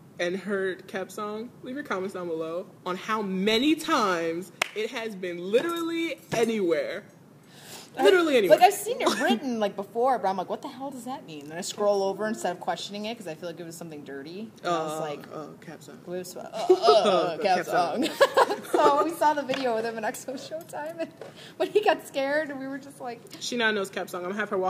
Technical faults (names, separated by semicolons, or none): crude rate conversion